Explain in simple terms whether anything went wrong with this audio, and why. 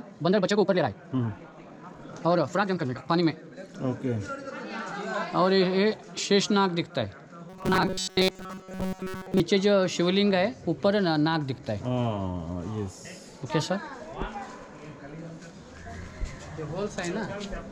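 From 0 to 3.22 s there is a time-stretched section: the audio runs about twice as fast at unchanged pitch, sounding rushed, likely from software squeezing it to fit. From 7.50 to 9.40 s there is robotic sound from repeated short buffers: a rigid metallic buzz near 188 Hz replaces most of the real audio, likely from a tiny chunk about 5 ms long being looped while fresh audio arrived too slowly.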